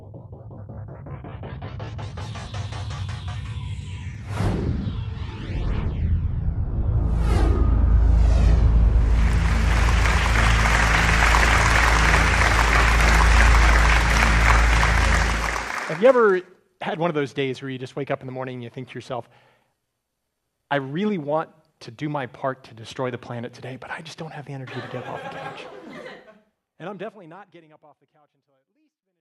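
No technical faults can be heard, and the level eases down smoothly over roughly the final three seconds, with no step or click.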